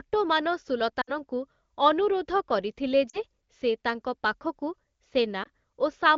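At 1.01 to 1.12 s, 3.09 to 3.19 s and 5.43 to 5.48 s the speech suffers lost AMR speech frames. Corrupted frames were discarded, and the decoder filled the gaps by repeating the last good pitch and spectral shape at falling gain. The first gap, about 60 ms, fits three 20 ms frames and gives a smeared, fading stretch. The 40 ms and 20 ms gaps are shorter warbles or dips. The wideband codec underneath is clean enough to suggest a mid-to-high rate.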